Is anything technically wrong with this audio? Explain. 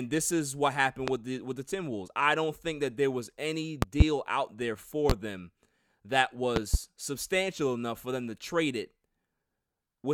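Yes, there are four loud pops. At 1.08 to 1.11 s there is a single pop. A double pop comes at 3.82 to 4.04 s, between "that there was any" and "out there". Another single pop falls at 5.10 to 5.13 s, before "them that". A double pop at 6.56 to 6.77 s leads into "substantial enough for them". Each is a sharp thump roughly 20 to 25 dB above the speech, which continues underneath. The likely cause is a sudden voltage pulse, from a plug, switch, static or driver glitch, entering the signal.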